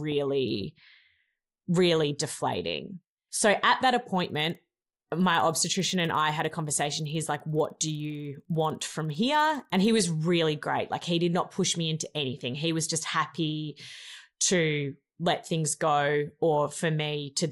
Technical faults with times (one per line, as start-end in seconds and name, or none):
4.15-9.90 resampler restarted on every block